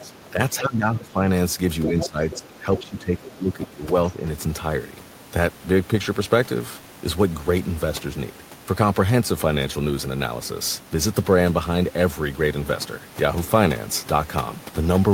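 From 0.00 to 1.27 s the talker's speech dips and thins in patches, for about a second in total. At its deepest it drops by roughly 15 dB. This is speech suppressed in double talk. The likely cause is an echo canceller that could not tell near speech from loudspeaker echo while both sides talked. It turned everything down together.

Inside that stretch, from 0.03 to 0.31 s, a second voice leaks through very faintly, around 25 dB under the speech. This is the other side's voice leaking through. The echo canceller likely left some of the loudspeaker sound in the microphone signal.

From 1.83 to 2.39 s the leak is much stronger, only about 10 dB below the speech.

The second suppression runs from 1.87 to 4.16 s. The speech ducks and breaks up for roughly one and a half seconds, again by about 15 dB at worst. Short scraps of the other voice slip through during it. One comes at 2.77 to 2.87 s, about 15 dB down. 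Another comes at 3.62 to 3.67 s, about 20 dB down.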